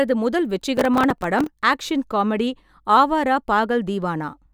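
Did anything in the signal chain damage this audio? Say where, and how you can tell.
Yes, at the driver/buffer stage: processor overload crackle runs from 0.77 to 1.47 s, ending just before "ஆக் ஷன் காமெடி". Around twenty buffers of a few milliseconds each missed their deadline and replayed stale audio with hard edges, producing gritty tearing over the speech.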